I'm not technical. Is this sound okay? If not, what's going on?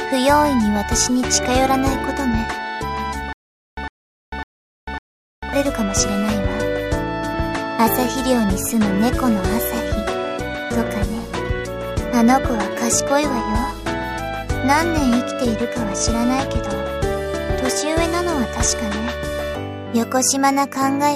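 No. From 3.33 to 5.53 s there's a stutter with silent gaps: a 0.11 s snippet repeats four times, with silence between. The playback likely stalled.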